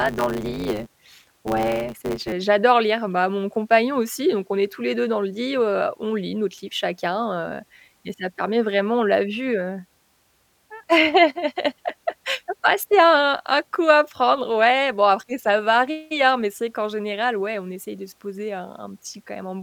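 From 0 to 2.33 s, before "j'adore lire bah mon", a block size mismatch (truncated) discards each block's tail, causing a 100 Hz buzz and speech running 1.16 times faster. Unlike resampling, the timbre stays.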